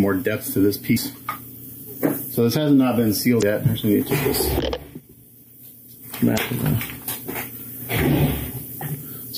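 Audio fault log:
0.96 s, 3.39–3.43 s, 6.34–6.38 s: damaged data in a compressed stream. Corrupted frames make the decoder misread the data and resynchronise, producing brief glitches lasting about 18 to 44 ms.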